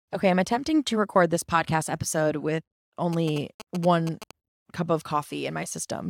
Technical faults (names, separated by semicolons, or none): GSM signalling bursts